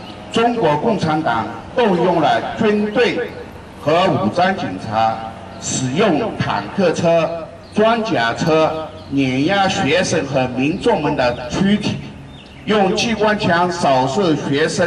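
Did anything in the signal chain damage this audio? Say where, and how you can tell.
Yes, at the codec stage. Throughout, the sound is dull and carries a gurgling, granular grain, likely from MP2 compression at a rate that fits about 80 kbps. On a spectrogram, upper sub-bands would flicker on and off in blocky strips, with coarse, quantised texture below.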